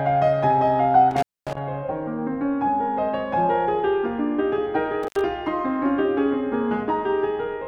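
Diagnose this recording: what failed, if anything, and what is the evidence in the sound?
The failure is in the analogue wiring: an intermittent contact, most likely a loose plug or cable. The music drops out twice, from 1.11 to 1.58 s with the line open for about 240 ms, and from 5.03 to 5.21 s with it open for about 78 ms. Crackle marks the edges of each gap as the contact breaks and remakes. On a waveform the signal collapses to a near-flat band of hiss between spiky edges. A spectrogram shows broadband vertical streaks bracketing a nearly empty gap.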